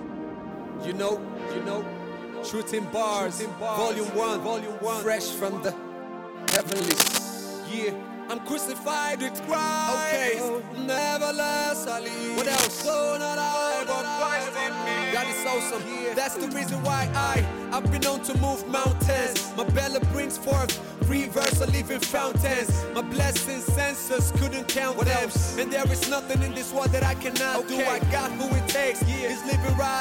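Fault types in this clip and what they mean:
Cable scratch noise: three bursts of dense, ragged rustling, at 6.48 to 7.19 s, 12.38 to 12.82 s and 21.39 to 21.56 s, roughly as loud as the sound itself, likely from a worn connector being moved. Unlike separate clicks, each burst is a continuous scratchy smear.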